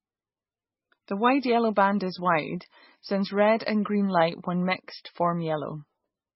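Speech, and it's got heavy codec damage all the way through: nothing above 5.6 kHz, plus a watery, swirly texture, likely MP3 compression at a very low bitrate, around 16 kbps.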